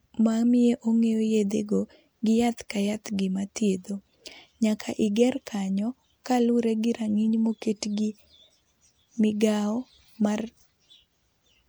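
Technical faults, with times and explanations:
0.61–1.08 s, CD scratch ticks: four brief ticks, each well under a millisecond, arrive at a steady spacing as the damaged spot comes round on each turn of the disc. The player patches the samples it cannot rebuild. The waveform shows tiny gaps, and the spectrogram shows thin vertical lines.
3.04 s, pre-echo: a short hiss spreads about 18 ms ahead of a sharp attack, because the codec's quantisation noise, sized for the loud onset, also covers the quiet moment before it within the same block. On the spectrogram a smeared broadband haze precedes the onset.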